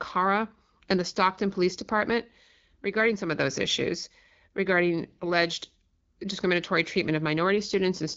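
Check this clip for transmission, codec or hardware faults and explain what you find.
Nothing is wrong with the signal: the speech comes through an AMR wideband (HD Voice) path that is working as intended, with only light coding that leaves it clear, consistent with a rate of about 12.65 kbit/s.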